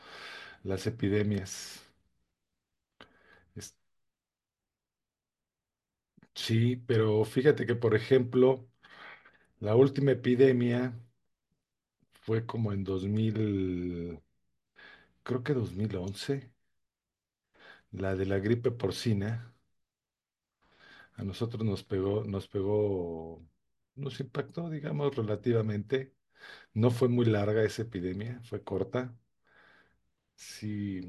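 No technical faults can be heard anywhere in the recording, and the signal holds steady throughout.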